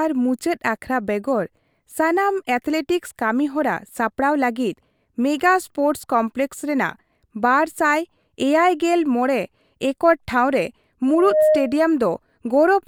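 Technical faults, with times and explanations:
11.08 to 11.84 s, loudspeaker feedback squeal: right after "ᱮᱠᱚᱨ ᱴᱷᱟᱶ ᱨᱮ", a steady tone near 618 Hz rises out of the speech. It swells over about a third of a second. It then sits roughly 5 dB above the voice. The microphone was hearing its own loudspeaker. At 618 Hz the loop gain passed one, so that frequency fed itself on each trip round. It kept growing into a single howl.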